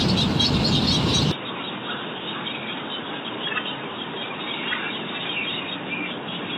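From 1.32 s on, the sound goes dull and quieter, with nothing above 3.8 kHz and faint new noise, likely from an input switched to a poorer device.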